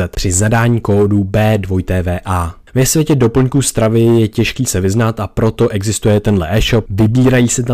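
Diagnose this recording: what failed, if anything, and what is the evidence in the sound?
Hard clipping runs through the whole speech clip. The signal is driven about 9 dB past full scale at a converter or gain stage, and roughly one sample in twenty gets shaved flat. Those squared-off peaks throw up high harmonics, so loud syllables crackle and fuzz throughout.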